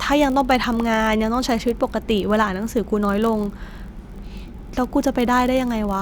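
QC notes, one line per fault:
Throughout: block size mismatch (padded). A steady buzz at 46.9 Hz sits under the speech for the whole clip. It comes from a very short silent gap repeating at that rate. One stage hands over blocks slightly shorter than the next stage reads, and the shortfall is filled with zeros. The rate fits a 1024-sample read block at 48 kHz. The speech runs at 0.999 times normal speed, too small a slowdown to hear.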